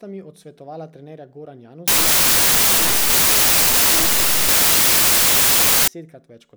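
Samples built from the wrong bytes run from 1.88 to 5.88 s of this speech clip. For those four seconds the bytes of each sample are assembled misaligned or swapped, so the rapidly changing low bits dominate, producing loud, harsh noise close to white on the louder sounds.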